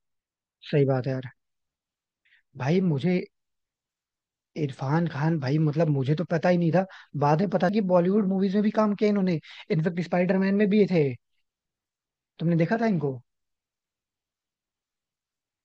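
At 7.69 s the speech jumps forward abruptly, as though about a fifth of a second has been cut out and the two sides butted together with no gap, so the flow of the talker lurches at that point. This is audio missing between chunks: the likely cause is a recorder or processor handling the signal in 4-second blocks and dropping a short stretch while closing one block and opening the next, leaving a seamless but audible skip.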